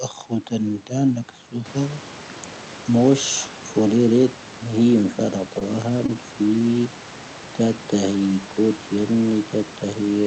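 At 5.59 s, 6.06 s and 6.59 s the speech hitches briefly in three short stalls from a late packet. Each time the jitter buffer ran dry, so the receiver stretched the last sound by about 17, 21 and 18 ms until data arrived, then carried on where it left off. Nothing is lost, but each moment sounds slightly held, with a faint buzz or dip. A spectrogram shows smeared, repeated harmonics, and the waveform shows a repeating cycle over that span.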